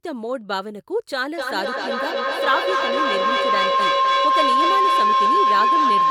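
From 1.38 s to the end of the speech, a feedback howl builds: two devices on one call share a room, and each microphone-to-loudspeaker trip adds level. It settles near 1 kHz, peaking about 7 dB above the speech, pulsing roughly every third of a second. A spectrogram shows a thickening horizontal band; the waveform swells.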